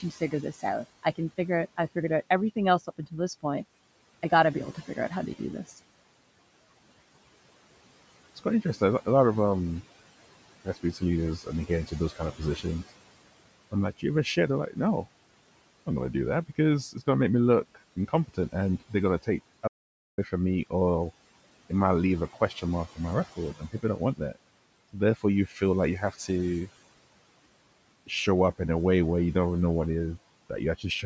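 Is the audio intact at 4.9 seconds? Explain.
No. Around 4.9 s, soft consonants and word endings sound swallowed, dipping by up to about 13 dB. This is speech cut by the noise suppressor, which mistook parts of the speech for background noise between 0.0 and 5.7 s, about a third of a second in total.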